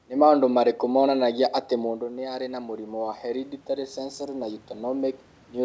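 In this speech clip, the automatic gain control starts rising at 1.21 s, just after "maũndũ marĩkũ", when the input level drops by about 10 dB, and the talker also moves relative to the microphone around 2 s. The gain climbs gradually through the end of the clip, so the voice and the room noise behind it swell together over several seconds instead of holding steady. The audio carries no content above 8 kHz, which fits a G.722 call path at 64 kbps.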